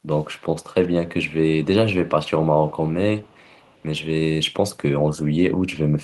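Echo leak in this speech, at 0.13–0.89 s, 2.6–2.85 s and 3.21–3.84 s: a faint copy of the voice returns 418 ms late, well below the speech, likely because a loudspeaker on the far end fed its microphone and the echo canceller let that pickup through.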